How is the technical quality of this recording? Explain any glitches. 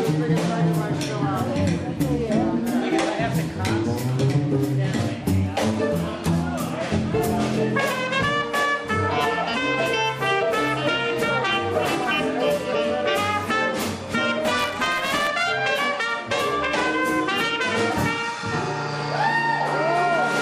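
The recording has one glitch. Buffer tearing runs from 14.44 to 15.28 s. The software filling the audio ring buffer and the hardware draining it had drifted out of step, so their positions crossed inside each period. A small slice of every buffer held audio from roughly 20 ms earlier, butted against current material with abrupt joins. The result is a rasping, robotic buzz at 172 Hz that is present only while there is sound. That repetition rate points to a 256-sample buffer.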